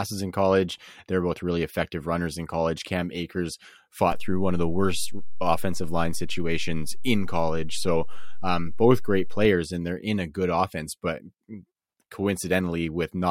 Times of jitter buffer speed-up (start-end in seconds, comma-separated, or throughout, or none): none